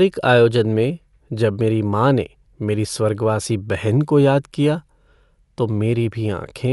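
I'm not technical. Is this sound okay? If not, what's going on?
No, not quite. All the way through, the speech sounds plainly dull and muffled, with a rough, fluttery noise hanging around the voice. Nothing comes through above about 11.4 kHz, so the crisp top end is missing. That's most likely Dolby Digital compression squeezed hard: to save space, the encoder drops the highest sounds and skips detail it can't afford, then fills the gaps with soft noise, which causes that grainy flutter.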